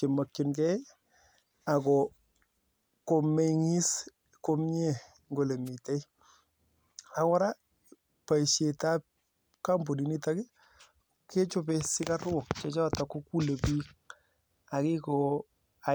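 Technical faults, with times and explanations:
5.65–5.70 s, wireless microphone noise hit: a brief burst of static, about 40 ms long, cuts across the speech. The radio link from the analogue FM microphone momentarily faded as reflected copies of the signal arrived out of phase and cancelled the direct path. With the carrier weakened, the receiver's own noise rose and broke through the demodulated audio before the signal recovered.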